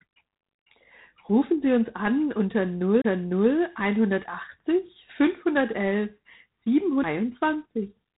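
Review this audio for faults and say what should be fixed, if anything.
G.726 ADPCM damage runs throughout: a harsh, rasping hiss rides on the speech and swells with its level, which fits 24 kbit/s coding with too few bits per sample. On a spectrogram there is a hard ceiling at 3.9 kHz and grainy noise filling the gaps between harmonics. To prevent it, capture or transfer over a wideband link, or use 32 kbit/s or better if G.726 cannot be avoided.

A CD skip occurs from 3.02 to 3.04 s: a mute of about 30 ms, then the audio resumes from a different point on the disc. The waveform shows a short flat gap and a discontinuity where the signal picks up out of step. To prevent it, rip with a secure, error-checking ripper from a clean, steady disc rather than recording live playback.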